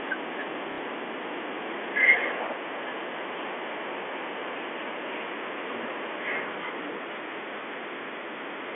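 From 0.72 to 0.78 s the speech has packet loss with the last packet repeated. For 60 ms the receiver replayed the previous audio rather than fresh data, which fits two lost 30 ms packets. The gap sounds like a brief robotic stutter against the band-limited G.711 telephone sound.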